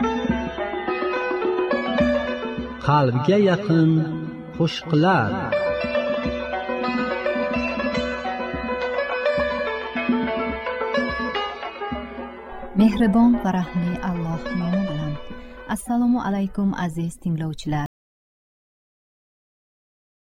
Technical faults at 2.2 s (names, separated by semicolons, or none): none